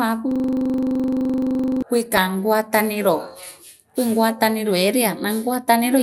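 From 0.31 to 1.82 s a hard, even buzz replaces the speech, pulsing at 23.4 Hz as a single 42.67 ms sliver of audio repeats exactly, some 35 times over. This is a system hang loop. The computer or its audio driver stalled, and the sound hardware kept replaying the same stretch of its ring buffer. The loop length fits a 2048-sample buffer, and at that size the repetition blurs into a steady drone rather than a stutter.

Between 2.06 and 2.29 s, and again between 5.44 and 5.54 s, the speech is overlaid with burbling noise. This is DAB burbling. Weak reception let bit errors, around a few tenths of a percent, slip past the error correction into the MP2 audio stream. The corrupted samples put short blips of noise in single sub-bands.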